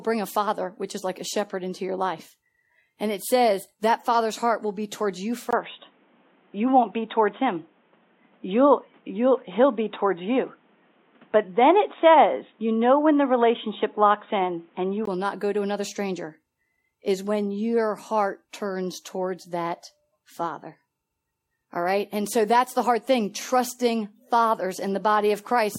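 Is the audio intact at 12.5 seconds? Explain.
No. From 5.51 to 15.07 s the speech turns dull and boxy, with nothing above 3.8 kHz. This is likely an input switched to a poorer device.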